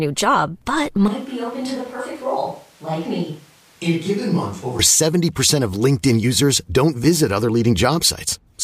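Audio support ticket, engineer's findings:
Right after "new job but", 1.08–4.79 s, sound goes roomy, hollow, thinner in bass, about 5 dB quieter, noise up. Likely a switch to a distant microphone, close mic dropping out.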